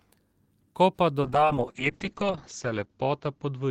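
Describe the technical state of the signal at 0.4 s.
At 0.4 s the signal is intact, with no dropout, distortion, glitch or other audible fault at that point.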